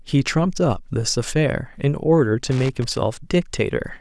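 At about 2.49 s there's a burst of loose connector crackle lasting until 3.01 s, roughly half a second. A worn or dirty contact is making and breaking as it moves, chopping the speech, so you get irregular scratchy crackle.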